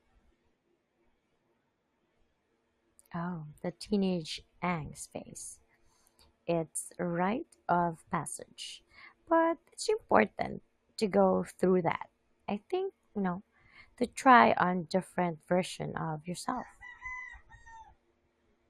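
The speech recording carries no audible technical fault anywhere along its length, with the signal holding steady and intact throughout.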